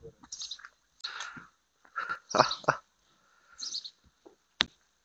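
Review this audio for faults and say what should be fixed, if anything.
Damaged data in a compressed stream, at 0.98 to 1.05 s and again at 4.64 to 4.69 s: a stretch of the encoded stream arrived corrupted, so the decoder could not parse those frames, lost its framing and had to hunt for the next valid header before resuming. Each time this comes through as a brief glitch lasting roughly 50 to 70 ms. To prevent this, carry the stream over a transport with checksums or retransmission, and keep metadata such as stream titles out of the audio payload.

Chunks out of order, at 2.04 to 2.16 s: a 60 ms block of audio was delivered or written one chunk late, so it plays after the block that should have followed it. No audio is missing, but the two 60 ms pieces are swapped, which leaves three abrupt joins across that 120 ms span. It sounds like a short jumbled moment. To prevent this, sequence-number each chunk and reorder in a jitter buffer before playback or writing.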